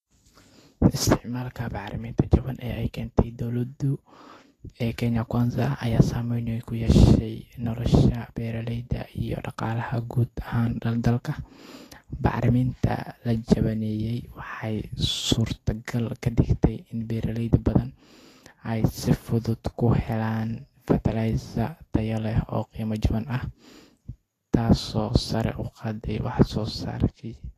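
From start to finish the speech carries plainly audible damage consistent with Vorbis compression, likely at a low setting, which fits a bitrate of around 36 kbps. The encoder drops everything above 14.2 kHz and rebuilds the coarsely quantised treble as noise, so sibilants turn hissy and grainy and consonant onsets smear. A spectrogram shows a hard ceiling at 14.2 kHz and speckled, noisy energy filling the upper bands.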